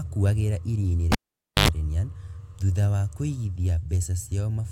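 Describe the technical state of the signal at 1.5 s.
At 1.5 s the speech has dropped to near silence, partway through a gap that opens with a pop at 1.12 s and ends at 1.68 s. Just before the speech returns comes a short burst of 50 Hz mains buzz, about 90 ms long, followed by a second pop. This is a cable pulled and plugged in while live. The connection is broken for about 0.51 s, and the buzz is the plug's tip touching before the connector fully seats.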